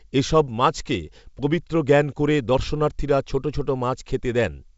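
No technical faults occur in this speech clip; it comes through G.722 wideband telephone coding at 64 kbit/s.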